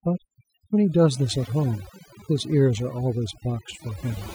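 A speech recording with overdone noise removal throughout: the noise reduction was set so strong that it cuts bands near the noise floor, leaving a reduced, twinkling background.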